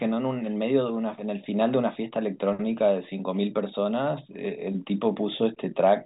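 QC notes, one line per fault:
No faults to note.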